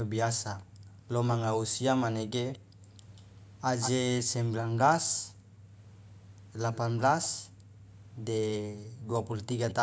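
At 0.63 to 0.88 s, the background is gated by the echo canceller. The microphone is pulled down by about 40 dB, so the room sound drops away and then returns. From 1.31 to 3.91 s, an echo leak adds a copy of the speech 185 ms late, roughly 10 dB below it. The likely cause is loudspeaker audio on the far side slipping past its echo canceller. Gating hits again at 2.59 to 2.82 s and 5.32 to 5.72 s. A fainter echo returns at 6.72 to 8.09 s, about 20 dB down. A long gate follows at 7.49 to 9.09 s. A brief echo scrap comes at 9.69 to 9.74 s.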